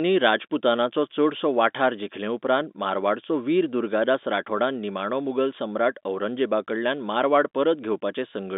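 No technical fault can be heard in this speech: it carries the narrow band of a normal telephone line, roughly 200 Hz to 3.7 kHz, as G.711 coding gives it, with nothing wrong in the signal.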